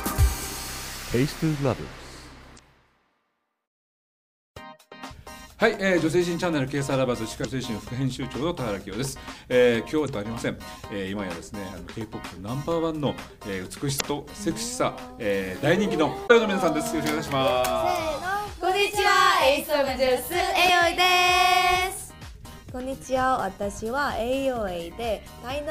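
Around 2.55–2.59 s, 7.41–7.45 s, 10.05–10.09 s, 13.97–14.01 s and 16.26–16.31 s you get short blips of damaged data in a compressed stream. Each time, corrupted bytes make the decoder misread frames and lose sync, so it glitches for roughly 40 ms before locking back on.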